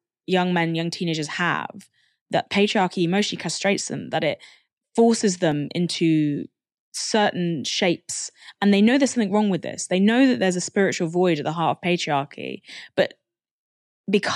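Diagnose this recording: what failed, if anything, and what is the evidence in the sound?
There's a single sharp click at 5.52 s, right after "them that it forces" and before "into certain shapes". It sounds like dropped samples: well under a millisecond of audio went missing, so the waveform jumps a step. The likely culprit is a driver or buffer hiccup.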